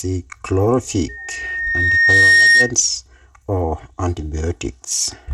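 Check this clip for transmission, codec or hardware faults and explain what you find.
Three faults are present: a hollow, phasey coloration and a gritty, band-limited top end run through the whole recording, and a howling tone cuts in near the start.

Channel delay (comb filtering), throughout: The speech sounds hollow and slightly phasey, as if heard down a tube, with certain frequencies consistently thinned out. This happens when one channel arrives roughly 3 ms after the other and the two are summed to mono. Content common to both cancels at regularly spaced frequencies, starting at around 200 Hz, which carves a fixed series of notches into the spectrum.

Bluetooth SBC compression, throughout: The treble is coarse and grainy, with a gritty noise riding on the sound, and nothing at all above 15.6 kHz. The damage is plainly audible. The likely cause is the Bluetooth SBC codec running at a modest rate, consistent with about 96 kbps. 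With few bits to spread across its wide sub-bands, the upper bands are starved and everything else is quantised roughly, which leaves this gritty, truncated top end.

Loudspeaker feedback squeal, 1.08 s to 2.73 s: A single piercing tone at 1.8 kHz swells up over about a second and a half, peaks at roughly 5 dB above the speech, and then stops. This is acoustic feedback. The microphone picked up the loudspeaker it was driving, and at 1.8 kHz the loop gain exceeded one, so that frequency kept reinforcing itself.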